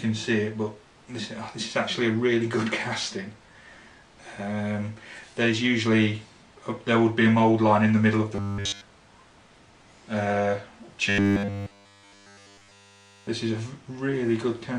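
From 8.35 to 8.84 s, and again from 11.09 to 13.28 s, the sound collapses into robotic sound from repeated short buffers: a rigid, metallic buzz locked at 100 Hz. The likely cause is audio arriving too seldom, so a roughly 10 ms buffer is replayed almost continuously while fresh material is skipped. Unlike a stutter or dropout, the fixed pitch persists while the sound's overall shape is only loosely followed.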